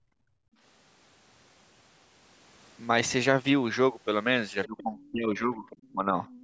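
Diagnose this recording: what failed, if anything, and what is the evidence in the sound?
The echo canceller gated the background at the call-processing stage, pulling the microphone down by about 24 dB from 0.0 to 0.59 s, so the room sound drops out.

Other side's voice leaking through: incomplete echo cancellation likely let loudspeaker sound reach the microphone, heard as faint scraps, about 20 to 25 dB below the talker, at 4.65–4.83, 5.7–5.92 and 6.27–6.43 s.

Speech suppressed in double talk: the canceller, likely confused by simultaneous talk, ducked the talker by roughly 20 dB from 4.67 to 5.66 s and roughly 15 dB from 5.93 to 6.17 s.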